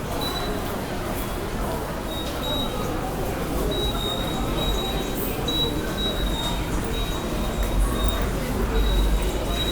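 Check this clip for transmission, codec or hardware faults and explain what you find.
No faults can be heard anywhere in the recording. The sounds come through intact, with nothing from the signal chain intruding on them.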